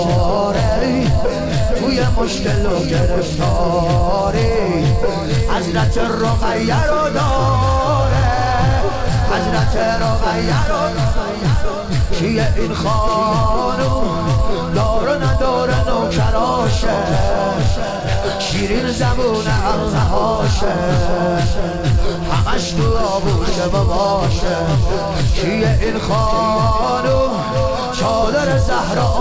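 No faults found; the audio carries the ordinary coding texture of a call path and nothing above 8 kHz, which fits a wideband call codec.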